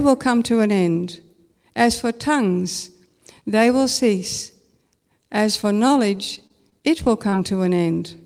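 Repeated packet loss (robotic sound) runs from 5.61 to 7.34 s. Nine gaps open up across this stretch, each patched by extending whatever sound came just before, with the longest gap about 29 ms. Roughly a tenth of the span is concealment, around 165 ms of filled-in sound with about 100 ms of real speech missing, so the voice turns choppy as one hole follows another.

A short stall from a late packet comes at 7.76 to 7.80 s. The packet that was due did not arrive in time, the jitter buffer emptied, and the receiver held the last sound for about 23 ms until it turned up, then resumed from the same point. Nothing is lost, but the speech briefly hangs, a drawn-out moment with a slight buzz or dip, and the delay grows by those 23 ms.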